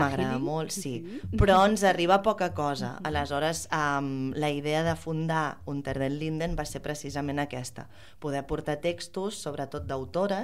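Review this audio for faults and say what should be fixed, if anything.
Nothing needs fixing, as the signal plays continuously with no audible technical defects.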